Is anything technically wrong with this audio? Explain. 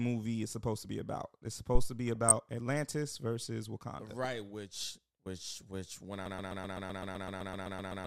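Yes. A phantom power thump hits at 1.75 s and runs to about 1.92 s. A supply switching on or off on the live input sent a voltage step through the coupling capacitors, and it is heard as a deep thump. This one decays quickly, within about 38 ms, instead of lingering. It is a single low-frequency bump with no tonal content of its own.

DAB burbling appears twice, from 2.15 to 2.31 s and again from 4.23 to 4.26 s, just before "which which which when". Weak reception let bit errors get past the error correction into the MP2 audio data, at an error rate of very roughly a few tenths of a percent. The first patch is longer and spans about ten frames, the second about three. Corrupted samples and scale factors put short noisy blips and level jumps into individual sub-bands.

A broken-record loop starts at 6.26 s, right after "which which which when", and lasts to the end. A fragment of about 128 ms repeats back to back, 14 times, so the speech is replaced by the same piece repeating at roughly eight times per second. 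The cause is likely a stalled player, encoder or stream that kept resending the last piece it held. The audio that should have played in that stretch is lost.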